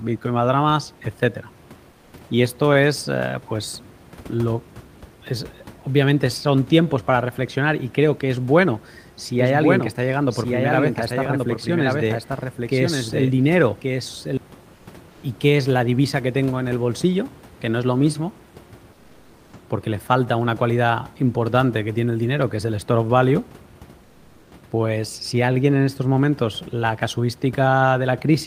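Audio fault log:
1.91 s, 14.75 s, 15.11 s, 18.95 s and 24.03 s, lasting 80 to 560 ms each: comfort noise in place of the background. The room's real hiss gets swapped for a flat, featureless wash, sometimes up to about 7 dB quieter, likely Opus DTX filling pauses.
9.39 to 14.37 s: doubled audio track. A second full-band copy trails roughly a second behind, around 5 dB down, dry and cutting in and out abruptly, likely from a slower second capture path.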